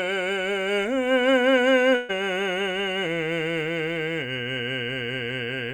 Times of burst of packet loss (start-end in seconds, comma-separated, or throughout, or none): 1.95-2.11